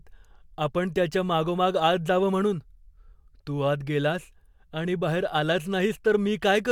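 Nothing technically wrong can be heard in the speech recording: the signal stays continuous and steady throughout, with no audible defect at any point.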